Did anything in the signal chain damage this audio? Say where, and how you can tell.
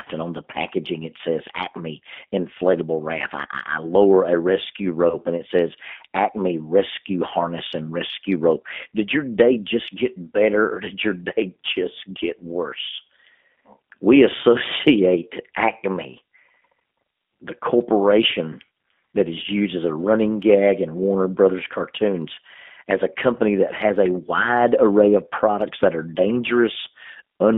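Yes. At the codec stage, the whole clip carries G.729 coding damage at 8 kbit/s: the line is limited to about 200 Hz to 3.6 kHz, and the speech sounds plainly rough and synthetic. This happens because the decoder rebuilds each frame from a vocal tract filter, a pitch predictor and a few pulses.

At the network stage, VoIP packet loss concealed by the speech codec shows up from 5.10 to 5.18 s, between "I lower a rescue" and "and it says". About 20 ms is missing, which fits a single lost packet. The decoder stretched its last pitch and filter across the gap, lowering the gain frame by frame, and the speech stays weakened until the predictor recovers.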